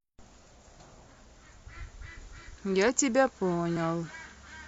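At 3.77 s, damaged data in the compressed stream corrupts a frame, so the decoder misreads it, loses sync and hunts for the next valid frame header. In the speech this comes out as a brief chirp, squawk, click or short hole.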